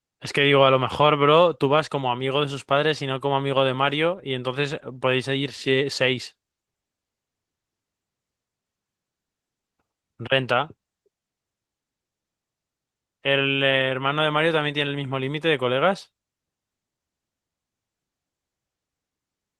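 There are no technical faults to describe at any point in this speech.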